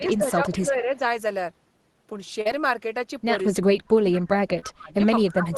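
From the start to about 1.02 s the speech sits low, dropping by as much as about 10 dB over roughly a second. This is likely speech suppressed in double talk: with both ends talking, the echo canceller could not tell the local talker from loudspeaker echo and attenuated everything. On a waveform the envelope looks squashed, and a spectrogram shows the upper harmonics thinning where the gain is pulled down.

Inside that stretch, from 0.07 to 0.17 s, a faint delayed copy of the sound comes through, about 25 dB below the speech and trailing it by about 204 ms. That is likely an echo leak, residual loudspeaker pickup that the far end's canceller let through. It is too quiet to see on a waveform. A spectrogram shows a weak repeat of the same pitch contour, shifted about 0.2 s later.

At 2.41 to 2.47 s there is short concealed packet loss. About 40 ms never arrived, and the decoder extended the preceding sound for about 37 ms before blending back. 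It is heard as a brief smear. On a spectrogram the harmonics flatten into a steady, slightly blurred patch instead of moving.

From 3.48 s to the end, speech suppressed in double talk returns, much deeper this time. The level falls by about 30 dB, so parts nearly disappear. The waveform shows the envelope collapsing toward silence in pieces, and the spectrogram shows the energy fading top-down, losing its highs first.

Within it, at 4.59 to 4.64 s, a second short concealed packet loss covers about a 20 ms hole with 26 ms of synthesised continuation. It is a small wobble that shows as a short frozen slice on the spectrogram.

Throughout, the spectrum stops near 12 kHz, consistent with a super-wideband Opus call path at a modest bitrate.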